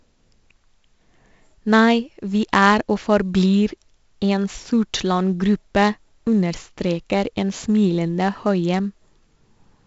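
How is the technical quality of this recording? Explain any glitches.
The recording's quality is poor because 4-bit ADPCM compression runs through the whole speech clip. Each sample is stored as a coarse 4-bit step from a predicted value, at a rate consistent with 64 kbps, so the error tracks the signal level as gritty hiss on every loud syllable and roughness on sharp onsets. Nothing is present above 7.7 kHz, which points to a reduced sample rate and leaves the speech dull.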